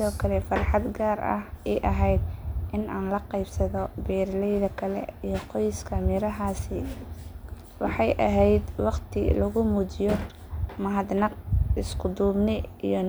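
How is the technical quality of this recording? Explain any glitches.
The recording carries no audible technical faults at any point, so there are no glitches to explain.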